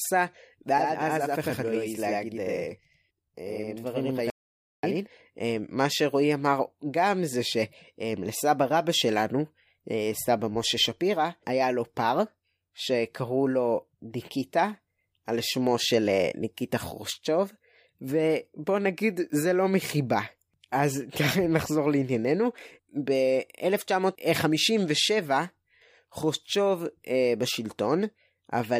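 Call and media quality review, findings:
Channel delay (doubling), 0.78 to 5.07 s: one channel runs about 93 ms late, consistent with a 4096-sample buffer, then summed to mono. Speech heard twice, a same-level slap echo.

Audio dropout to silence, 4.30 to 4.83 s: input likely lost at the capture device or link while zeros kept being written. Speech cuts to dead silence for 0.53 s, no room tone.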